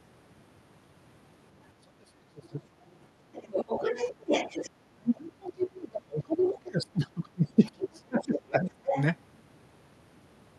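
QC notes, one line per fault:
1.81–2.58 s and 4.77–8.97 s, speech suppressed in double talk: the talker sinks hard, roughly 40 dB at worst in the first stretch and around 30 dB at worst in the long second one. That's likely the echo canceller ducking everything while both sides talk.
3.19–3.32 s, background gated by the echo canceller: the room sound drops about 14 dB for a moment while the far end plays, then pops straight back once the canceller releases.
3.33–4.70 s, 5.07–5.12 s, 5.62–5.67 s and 7.65–9.02 s, other side's voice leaking through: a second voice slips past, sitting roughly 10 dB under the talker in the longer stretches, with a louder quick scrap at 5.07 s and a faint one at 5.62 s. It's likely leftover loudspeaker echo in the mic.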